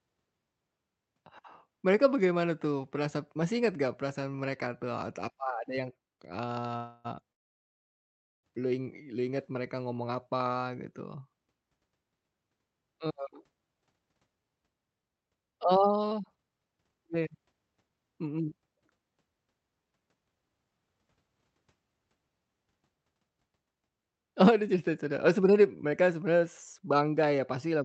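Speech over a call link, and the stream clearly struggles with packet timing. Right after "atau apa ada yang", from 6.17 to 6.65 s, there's repeated stalls (stutter): three brief hiccups, the longest about 33 ms and roughly 60 ms in total, where the receiver stretches the last bit of sound while it waits for late packets. Nothing is dropped, but the phrase catches and drags. It then gets worse, with two call audio freezes before "lu ing lu inget". The first, 6.77 to 7.07 s, holds the audio for about 0.3 s with a continued buzzy tail. The second, 7.33 to 8.45 s, runs about 1.1 s and is almost entirely silence once the held sound fades out. These are likely packets stuck in transit draining the jitter buffer. The speech then resumes exactly where it stopped, so the clip is stretched rather than missing anything. Later the buffer is carrying too much delay and works it off through jitter buffer speed-up, trimming tiny pitch-period slices so the speech gets faster without any change in pitch. 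From 13.18 to 17.97 s it runs at 112% and sheds around 0.7 s. From 19.85 to 20.79 s it runs at 115%, about 0.15 s shorter. From 23.75 to 27.09 s it runs at 109%, losing roughly 0.3 s. All three stretches sound a bit rushed. Underneath, the codec's coding noise and a top end that stops around 8 kHz fit an Opus call path.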